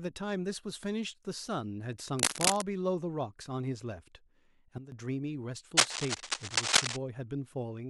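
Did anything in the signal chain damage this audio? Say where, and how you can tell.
Yes. A sudden gain jump at 4.78 s drops the speech and its background noise together by about 12 dB, recovering at 4.92 s. The step is instantaneous, unlike an AGC or fade ramp, so it is likely a digital gain setting applied without smoothing.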